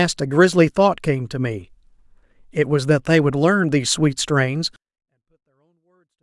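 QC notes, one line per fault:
4.76–6.22 s, 24-bit alignment error (too quiet): speech stays clean but suddenly falls about 48 dB, near inaudible, as low-byte 24-bit samples are read as full 32-bit values.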